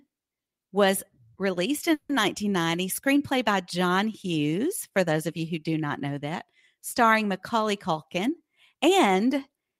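At 1.93 s, just after "was released", a call audio freeze sets in until 2.12 s. The last sound buzzes on for 160 ms, then about 20 ms of silence, likely from late packets. Nothing is lost.

From 8.19 to 9.67 s a jitter buffer speed-up runs the speech at 111% with unchanged pitch. Repeated pitch-period cuts remove about 150 ms, so it sounds hurried.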